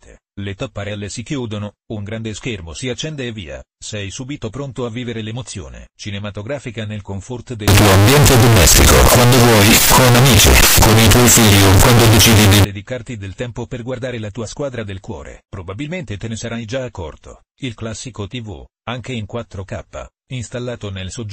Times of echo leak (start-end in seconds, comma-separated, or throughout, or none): none